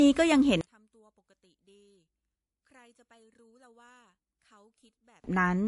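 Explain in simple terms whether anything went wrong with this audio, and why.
Two things went wrong. Throughout, the speech carries the mixed-together artefacts of transcoding between lossy codecs, likely from being compressed in one format and then squeezed again into another. Each pass added its own blur on top of the last, and nothing above 11.1 kHz survives, so the top end sounds dull.

From 0.61 s to 5.24 s, one channel inverted (a stereo side flipped upside down) makes the voice nearly disappear when the two sides are combined into one, likely on mono playback. The matching halves cancel each other, leaving only a faint remnant until 5.24 s.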